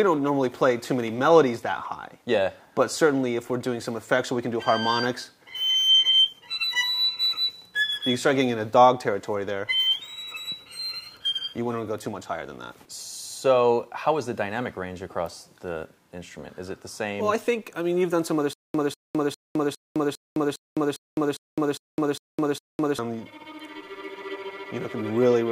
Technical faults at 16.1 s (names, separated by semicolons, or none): none